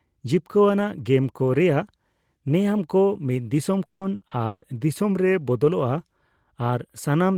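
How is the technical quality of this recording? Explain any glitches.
The recording is spoiled by a burst of repeated packet loss (robotic sound) between 3.85 and 4.64 s. Over that stretch the stream dropped or delayed packets four times, each gap up to 160 ms, and the receiver covered them by extending the last received sound, so about 420 ms, more than half the span, is patched rather than real. The speech there turns choppy, with pieces of the voice missing.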